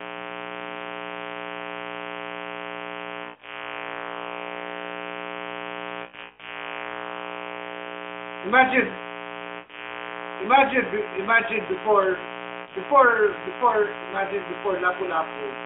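A steady, raspy mains buzz runs through the whole clip, only about 10 dB below the speech. Sharp switching spikes, twice in every 60 Hz mains cycle, have let a dense stack of harmonics into the narrowband mobile signal. Lost AMR speech frames occur at 3.24–3.69 s, 6.02–6.68 s, 9.60–9.94 s and 12.62–12.77 s. During each gap the decoder stretches the last good sound and fades it, which is heard as dips and warbles. The second burst is patchy and spread over about 0.36 s.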